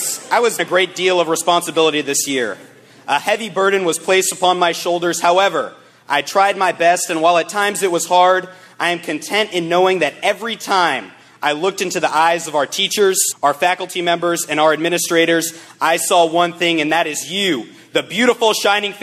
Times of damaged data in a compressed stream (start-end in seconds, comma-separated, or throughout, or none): 0.58, 13.31-13.33